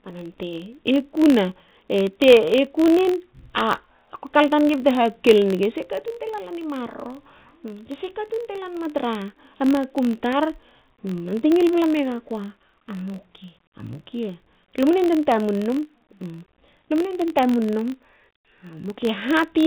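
Throughout the speech runs a filter restarted on every block: each block starts from silence, leaving a 46.9 Hz ticking buzz, which fits 1024-sample blocks. Unlike mains hum, it rises and falls with the speech level, heard over telephone-band G.711 audio with nothing above 4 kHz.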